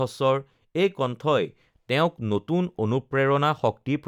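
No technical faults turn up anywhere in this speech recording, which comes through intact without any dropouts, clicks or interruptions.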